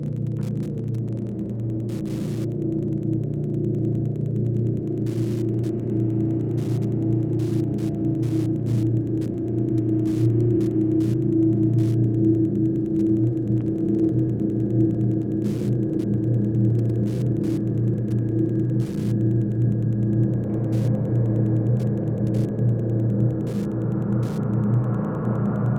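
Faint, steady ticking, about ten per second, runs beneath the whole clip. This is Wi-Fi interference: the audio circuitry rectifies a nearby radio's 102.4 ms beacon.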